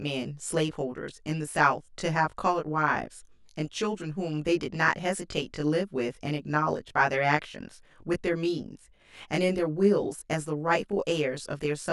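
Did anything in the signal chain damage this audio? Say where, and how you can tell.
Yes. Channel delay (comb filtering) colours the speech for the whole clip. It starts at the driver or buffer stage. One channel arrives about 20 ms late, which fits a short buffer. Summed to mono, the channels cancel in fixed notches from around 30 Hz upward. The voice sounds rough and slightly doubled.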